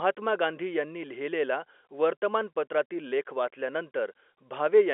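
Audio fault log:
No faults found; the speech stays within a 300 Hz to 3.4 kHz band, which fits a G.711 mu-law telephone line.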